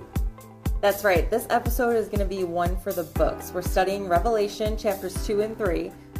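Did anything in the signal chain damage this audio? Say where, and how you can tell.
No, nothing damaged it.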